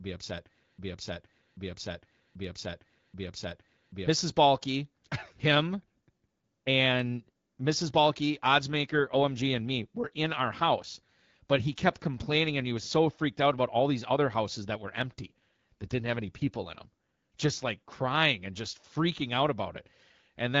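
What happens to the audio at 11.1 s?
At 11.1 s the call is in an AMR rate drop, running from 8.68 s to 12.66 s, just before "he was so freaked". The link forces the AMR-WB coder down from 12.65 to 8.85 kbit/s, trading speech bits for error protection, so the voice turns rougher and more synthetic. On a spectrogram the band stays the same width and harmonics look smeared and noisier; the waveform shows no gap or level step.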